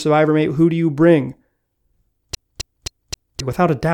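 A speech clip with a CD stuck on one turn from 2.35 to 3.40 s. A scratch keeps throwing the laser back one track. The same 264 ms slice plays four times, with a brief mute at each jump. The result is a fast, even stutter. Normal playback resumes at "without a".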